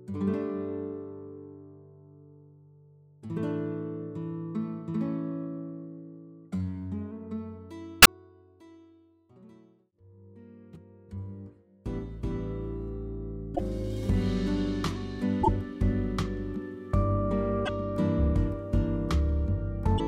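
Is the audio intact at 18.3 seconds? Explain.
Yes, the audio is intact at 18.3 seconds, with no dropout, glitch or other fault at that moment.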